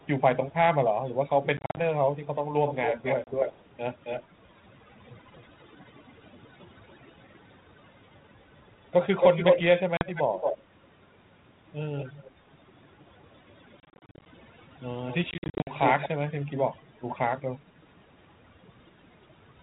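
Overdone noise removal runs through the whole clip. The background is squeezed to near silence with little twinkling specks, because quiet parts sitting near the noise floor get cut along with the noise.

Echo leak shows up five times, and it's likely a speakerphone whose echo canceller let some of its own pickup back into the call. From 0.01 to 0.54 s there's a barely audible copy about 330 ms behind. From 2.66 to 8.16 s it's much stronger, trailing by 270 ms. From 9.2 to 10.62 s the copy, 224 ms late, is actually louder than the direct speech. The same 224 ms copy returns more faintly from 11.98 to 12.3 s and from 13.22 to 16.09 s.

Packet loss on the ADPCM call comes in at 1.57–1.81 s, 3.24–3.43 s, 9.97–10.05 s, 13.8–14.26 s and 15.31–15.75 s. Each has hard-edged silent holes of up to 50 ms, scattered over up to about half a second at 13.8 s. After each gap the decoder's predictor and step size are out of step with the sender's, so speech comes back briefly with some grit before settling. 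Underneath, the 4 kHz band limit of the 32 kbit/s G.726 link is audible.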